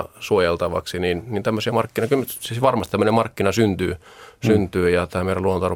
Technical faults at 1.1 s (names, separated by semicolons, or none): none